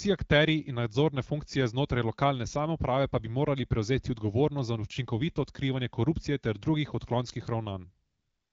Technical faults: AMR comfort noise

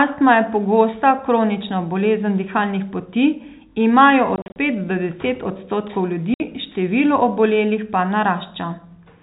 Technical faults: packet loss filled with silence

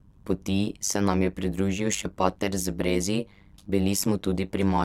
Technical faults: overlap-add ripple

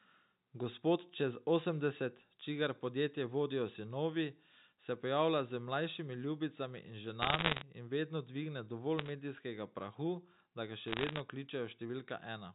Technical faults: microphone volume stepped down; bit errors on a digital phone line

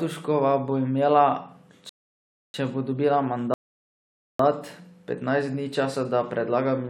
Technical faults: rebuffering stall

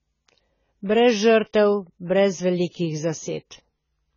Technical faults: AAC compression

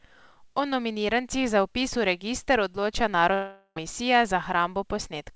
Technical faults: long network dropout

